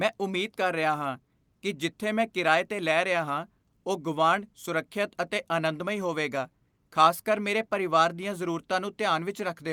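No technical faults are audible.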